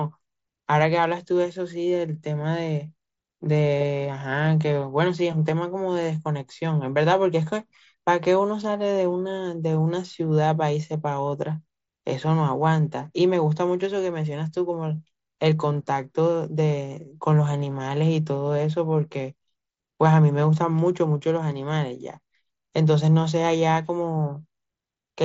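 Nothing goes wrong anywhere in this bit of speech, which comes through the wideband Bluetooth headset path with the sound you'd expect of a 16 kHz mSBC link.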